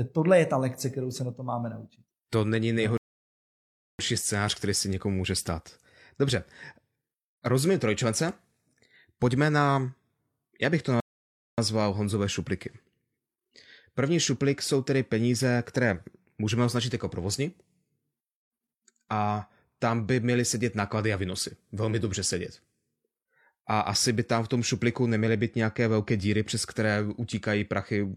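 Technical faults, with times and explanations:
2.98–3.99 s and 11.00–11.58 s, rebuffering stall: the speech cuts to dead silence twice and then picks up exactly where it left off, with nothing skipped. The first gap runs about a second and ends just before "scénář který se někomu". The second, about 0.58 s, comes right after "já bych to". In both cases the player ran out of downloaded audio and simply waited for more to arrive, so the pauses just add time to the playback.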